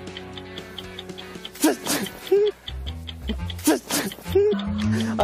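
At 1.34 s and 4.52 to 4.54 s, damaged data in a compressed stream makes the decoder lose frame sync, giving a brief chirp, squawk, click or short hole.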